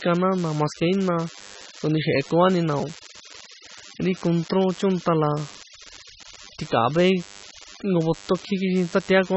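DECT cordless phone buzz runs through the whole clip, from start to finish, sitting about 25 dB below the speech. A nearby DECT handset or base station fires a short radio burst every 10 ms, and somewhere in the audio path a circuit rectifies that energy into the signal. The result is a steady, thin buzz at 100 Hz, the burst rate, with a dense stack of harmonics above it, heard continuously under the talker.

MP3 compression damage is also present throughout, and it is heavy. The sound is watery and swirly, with metallic chirps on s sounds and smeared attacks. Nothing remains above 8 kHz. This is likely caused by MP3 encoding at a very low bitrate, around 19 kbps. Starved of bits, the encoder zeroes the weaker spectral lines, which flicker on and off from frame to frame, and it cuts the treble off at a fixed frequency.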